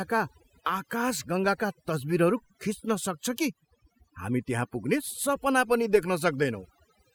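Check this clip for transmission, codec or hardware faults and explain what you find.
The clip carries one fault, present from start to finish: overdone noise removal. A noise reducer set too aggressively is pulling individual frequency bands down whenever they sit near its noise estimate, taking low-level speech detail along with the noise. The background drops and breaks up into twinkling specks.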